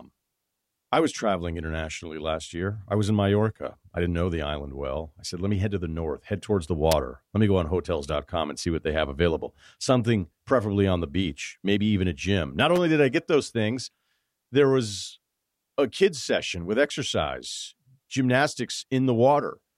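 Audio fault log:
6.92 s and 12.76–12.78 s, electrical switching spike: sharp snaps after "north head towards the" and before "did I get those", likely a nearby switch arcing. First peaks near -5 dBFS, second softer around -15.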